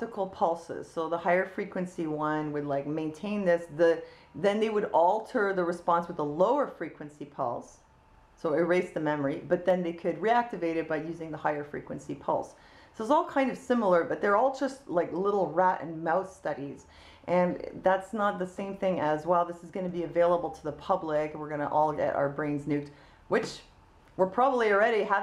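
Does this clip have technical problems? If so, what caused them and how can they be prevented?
Yes. There is a single sharp click at 9.70 s. It is likely dropped samples. A fraction of a millisecond of the stream is missing, so the waveform jumps straight to a later value. Give recording and playback buffers enough headroom so the stream never skips.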